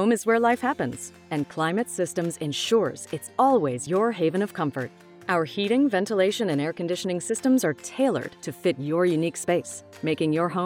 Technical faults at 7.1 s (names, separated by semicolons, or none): none